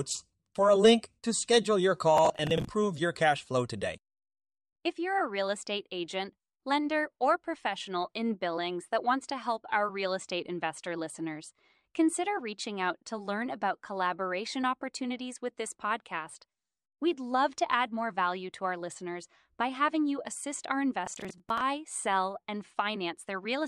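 At 2.17 to 2.68 s and again at 21.06 to 21.61 s, processor overload crackle: the processor repeatedly misses deadlines for buffers of around 10 ms, refilling each gap with stale audio, so the speech picks up a gritty, tearing crackle that stops when the load eases.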